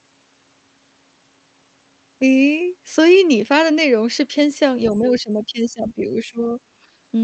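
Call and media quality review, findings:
Other side's voice leaking through, 4.9–5.21 s: faint second voice, around 20 dB under the talker, short scrap only. Likely residual loudspeaker echo the echo canceller missed. Separate voice rather than a smeared copy of the talker, so not reverb.

Speech suppressed in double talk, 4.93–6.59 s (roughly 1.5 s affected, deepest dip around 15 dB) and brief 6.82–6.86 s (around 10 dB): talker level pumps down in pieces while the far side is present. Likely echo canceller clamping both sides during double talk. Unlike a network dropout, tied to double talk rather than packet loss.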